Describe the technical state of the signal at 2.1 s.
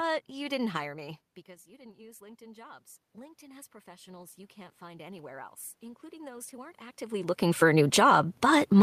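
At 2.1 s the voice and the room noise behind it are swelling together, part of a slow automatic gain rising that runs from 0.80 s, just after "you didn't", to 8.35 s. The input dropped by about 21 dB, and the automatic gain control responded by raising its gain by about 12 dB.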